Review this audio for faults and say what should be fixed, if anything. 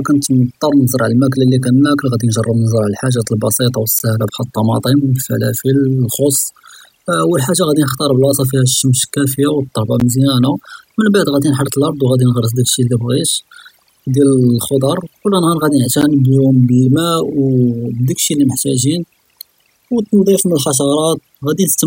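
Overdone noise removal runs through the whole clip. The suppressor was set too aggressive, so frequency bands near its noise estimate are pulled far down. Quiet speech components disappear along with the noise, leaving near-silent background with twinkling specks. Reduce the suppression depth and re-process from the unprocessed recording.

A gap between chunks occurs at 4.0 s (just before "בחאל אלטמאטם"), at 10.0 s (between "פיהא אשמס כאפיה ואלתורבא" and "מזיאנא ממבעד ראדי נחרת"), and at 16.0 s. Each is a hard-edged hole of about 13 ms, repeating every 6 s, where silence sits at the joins of 6-second segments. Trim codec padding at segment boundaries or use gapless concatenation so each chunk starts exactly where the previous one ends.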